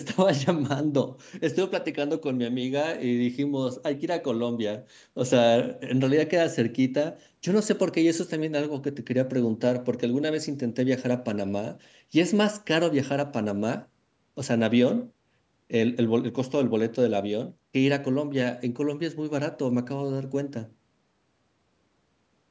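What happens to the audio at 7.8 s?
Nothing goes wrong at 7.8 s: the speech carries on intact through that moment, with only the ordinary call-microphone band limit, nothing above 8 kHz and the lowest bass trimmed, which is normal rather than a fault.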